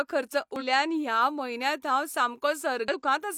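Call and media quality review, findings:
Short glitch in the speech, 0.56–0.63 s (about 65 ms). Damaged data in a compressed stream: corrupted bytes in the encoded stream, so the decoder misreads those frames and loses sync until it finds a valid frame header.

Second glitch, 2.88–2.94 s (about 59 ms). Same mechanism: damaged data in the compressed stream garbles decoding briefly before the decoder relocks on the next good frame.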